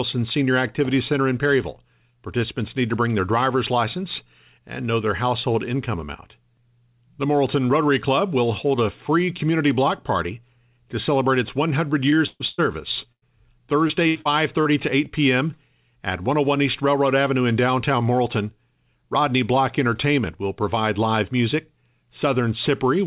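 Short concealed packet loss at 12.10 to 12.14 s: about 20 ms of the call failed to arrive in time, and the receiver bridged the hole by extending the sound just before it, then crossfaded back into the real signal. The result is a brief smear or wobble rather than a clean dropout. Any detail that fell inside that sliver is gone, and the narrow, telephone-like band with nothing above 4 kHz carries through the repair unchanged.

Burst of packet loss at 12.26 to 12.42 s, 12.48 to 12.60 s and 13.12 to 13.24 s: several packets in a row went missing each time, about 140 ms, 100 ms and 100 ms respectively. The receiver kept extending the last sound while turning it down, so each gap becomes a held buzz or fading hiss. The first one fades all the way to silence for its final 30 ms. The audio then picks up further along, with the stretch in between lost.

Repeated packet loss (robotic sound) from 13.88 to 14.67 s: four separate gaps hit this stretch, the longest about 77 ms, and together they leave around 180 ms missing, roughly a fifth of the span. 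Each hole is patched by extending the preceding sound, but the next loss follows before the signal settles. That gives a choppy, robotic quality, with fragments of the audio dropped out between the patches.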